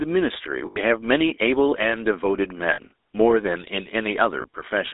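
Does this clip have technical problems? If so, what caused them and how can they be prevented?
Yes. The speech has a buzzy, gravelly roughness throughout and a narrow, boxy band of roughly 300 Hz to 3.7 kHz. This is the GSM full-rate codec at work, consistent with 13 kbps. It models the vocal tract and drives it with a sparse pulse excitation, which loses fine detail. To prevent it, record or transmit through a wideband, higher-bitrate codec rather than a phone link.

At 0.66–0.80 s, 2.72–2.80 s and 4.42–4.46 s, the sound freezes into a rough, metallic ring. These are lost GSM frames: the decoder repeats the last good frame, about 100 ms, 60 ms and 20 ms worth. To prevent them, use a more reliable network connection or add error protection to the transmission.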